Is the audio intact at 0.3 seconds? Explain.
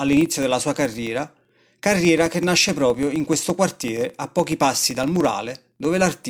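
No. At 0.3 seconds the speech carries a steady ticking buzz near 23.4 Hz, present throughout and rising and falling with the level. This is a filter restarted on every block: it resets to silence each time, adding a small transient, which fits a 2048-sample block.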